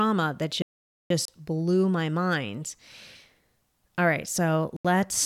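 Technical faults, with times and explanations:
0.62–1.10 s, playback stall: the speech stops mid-flow and the output stays silent for about 480 ms before carrying on toward "blew my mind". A gap that long, followed by a clean resumption, likely means the player ran dry or its thread was blocked, not a wireless dropout.
1.25 s and 4.76–4.85 s, Bluetooth stall: there are two brief holes in the speech, 30 ms just before "blew my mind" and 82 ms near the end. Both are far shorter than the earlier stall, which fits the headphone buffer emptying while delayed packets were likely being resent.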